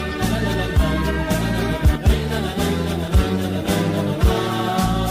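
A skip ahead at 1.95 s: about a second of audio was dropped while later audio waited, so playback jumps forward with the two sides joined almost seamlessly.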